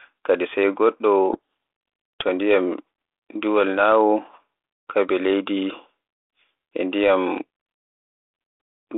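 From 1.33 to 2.23 s the receiver unpacks the G.726 code words with their bits in the wrong order, a codec payload misread. Each difference value is decoded wrongly, so the speech on this 32 kbit/s telephone-band line is buried in harsh distortion until the packing matches again.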